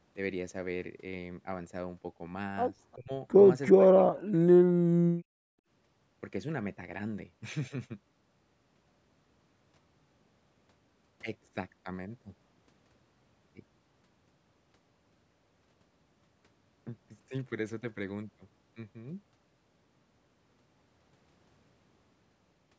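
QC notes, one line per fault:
2.95–3.12 s and 3.72–5.38 s, speech suppressed in double talk: the talker's level drops in patches while the far side is active, by about 20 dB in the first brief dip and by up to about 40 dB in the second, with roughly a second of the later span broken up or near-muted. The likely cause is the echo canceller mistaking near-end speech for loudspeaker echo and attenuating it along with the echo. The call band, topping out near 8 kHz, is unaffected.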